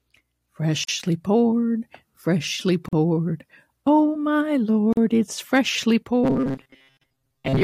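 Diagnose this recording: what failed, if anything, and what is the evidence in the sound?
Codec stage: a gap at a join of encoded pieces recurs every 2.0 s, at 0.84 s (just before "poured freshly"), 2.88 s (just after "poured freshly"), 4.93 s (just before "it's freshly") and 6.97 s. Each gap lasts 43 to 46 ms with smeared edges. Separately encoded segments were concatenated without trimming encoder delay and final-frame padding.

Driver or buffer stage: from 6.24 s to the end the speech becomes a rigid, metallic, robotic sound fixed at 134 Hz. That rate fits a block of roughly 7.5 ms being replayed over and over while most of the incoming audio is skipped. The likely cause is buffer underrun handled by repeating the last short buffer.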